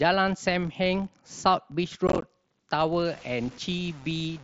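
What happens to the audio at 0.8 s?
A filter restarted on every block is resetting its state and beginning each block from silence, which fits a 1024-sample block. At 0.8 s, as throughout the clip, those restarts leave a small transient each time, heard as a 43.1 Hz buzz that rises and falls with the speech level.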